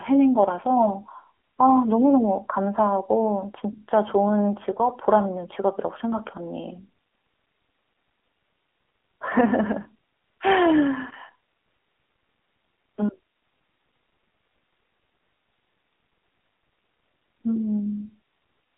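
From start to finish the speech has passed through the AMR narrowband mobile codec. The signal was squeezed into a telephone band of roughly 300 Hz to 3.4 kHz, and each 20 ms frame was rebuilt from a vocal-tract model driven by a handful of pulses. With so few bits to spend, which fits the 7.4 kbps mode, the voice sounds thin, muffled at the top and plainly buzzy and synthetic throughout.

From 9.82 to 9.88 s, AMR bit errors strike. Over those 64 ms, which fits about three 20 ms frames, a weak link flipped a fair share of the lightly protected bits, around 7 percent, while the core bits still passed their check. The decoder placed its excitation pulses wrongly and misread fine gain and spectral values, so the voice keeps its pitch and loudness but briefly turns hoarse, scratchy and gargly.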